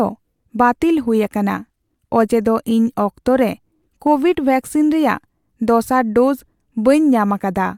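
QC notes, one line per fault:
No faults heard.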